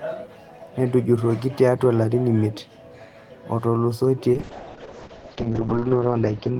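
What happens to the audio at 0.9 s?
Nothing goes wrong at 0.9 s; the speech there plays through intact, with no dropout, click or distortion.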